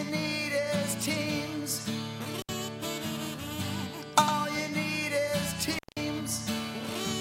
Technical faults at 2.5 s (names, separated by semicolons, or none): intermittent contact